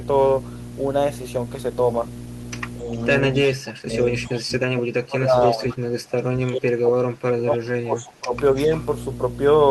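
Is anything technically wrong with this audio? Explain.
Yes, there are three problems.

Mains hum runs through the whole clip: a steady low 60 Hz tone with a few low harmonics, roughly as loud as the speech itself. A ground loop or nearby transformer is feeding the power line frequency into the signal path.

Speech suppressed in double talk appears from 4.25 to 6.27 s and again from 6.47 to 8.33 s. The speech dips by up to around 25 dB, for about one and a half seconds in the first span and about two seconds in the second. The likely cause is an echo canceller that couldn't separate this talker from loudspeaker echo while both sides spoke at once, so it turned everything down.

Echo leak shows up as a brief scrap from 5.69 to 5.77 s: a copy of the speech delayed by 265 ms, roughly 20 dB below the main signal. It likely comes from a far-end loudspeaker whose echo canceller let some of its microphone pickup through and sent it back.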